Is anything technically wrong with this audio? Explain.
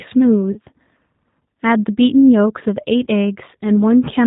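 Yes. The whole speech clip carries G.729 codec damage, plainly audible. Frames are rebuilt from a vocal tract filter and pulses, which fits 8 kbit/s, leaving rough, band-limited speech.

VoIP packet loss concealed by the speech codec occurs at 0.52 to 0.58 s and 3.04 to 3.07 s. The decoder extends its last frame into a fading buzzy tone or coloured noise before speech recovers.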